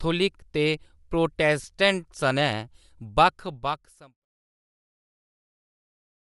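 From the start the whole clip has a grainy, breathy top end, most likely Bluetooth LC3 compression, with the upper spectrum thinned and noise-filled at a rate that fits around 48 kbps. At 1.63 s there's a brief smeared blip from lost LE Audio frames: about 10 ms went missing and the decoder patched it with noisy, reused spectrum. The smooth fade out that starts around 3 s and ends at 4.26 s goes down cleanly.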